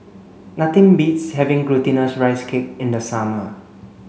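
Nothing in the speech stood out as a technical fault on listening.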